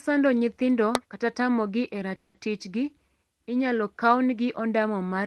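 At 0.95 s a sharp snap or tight cluster of clicks cuts across the speech, just before "tamogi e". It is an electrical switching spike. A nearby switch, motor or static discharge likely threw a brief arc, and the audio line picked it up. The click sits on top of the speech rather than replacing it. Nothing is lost or shifted. It is brief, over almost instantly.

Right after "tamogi e", from 2.15 to 2.36 s, the sound stalls. This is a call audio freeze. Packets were likely held up in transit, and the jitter buffer ran dry. The receiver stretched the last bit of sound into a fading buzz or hiss for about 190 ms. It never drops to silence. When the packets arrive, the speech resumes where it stopped. Nothing is missing, but everything after is about 190 ms later.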